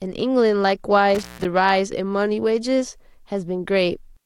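Intermittent contact disturbs the speech between 1.15 and 1.45 s. A loose connection in the cable or plug momentarily opens, so the signal drops out for about 156 ms, with crackle at the edges of the gap and only faint hiss remaining while the line is broken.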